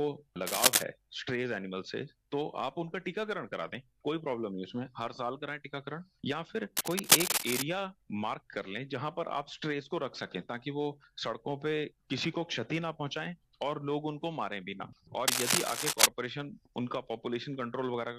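Bursts of harsh, uneven scratching cut across the sound from 0.47 to 0.83 s, roughly 10 dB above it, then more quietly, about 5 dB up, from 6.77 to 7.62 s and 15.28 to 16.06 s. This cable scratch noise likely comes from a worn connector or cable shifting.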